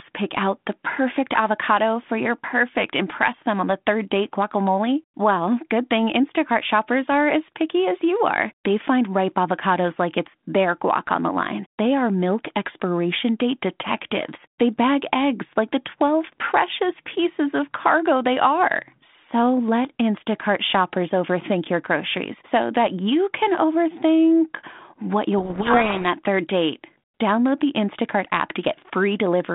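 At 25.38 s, running to 26.06 s, the speech suddenly goes under a burst of harsh, gritty distortion. That's a codec payload misread: the two ends of the G.726 link disagree on the bit order inside each code word, so the decoder gets plausible-looking values that are actually scrambled. Because ADPCM builds each sample on the last, the errors pile up into rasping noise for those 0.68 s before the speech comes back through the narrow 150 Hz to 3.6 kHz telephone band.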